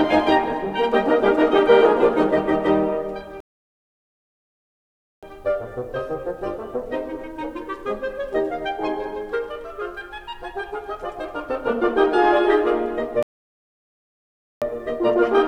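Rebuffering stalls at 3.40 to 5.23 s and 13.23 to 14.62 s: the player's download buffer ran dry, so the music drops to silence, then resumes exactly where it stopped, adding about 1.8 s and 1.4 s.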